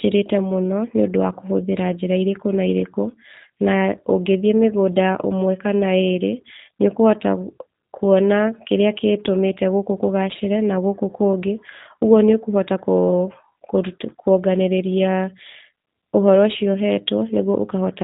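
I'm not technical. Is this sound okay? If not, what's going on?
No. G.729 codec damage runs through the whole recording, from start to finish. This is a telephone-style compression used for internet calls. Rather than keeping the actual sound wave, it stores a rough description of the voice's shape and pitch, plus a few pulses, and rebuilds the speech from that. Everything above about 3.8 kHz is lost, so the speech sounds muffled and boxy, with a plainly rough, slightly artificial edge.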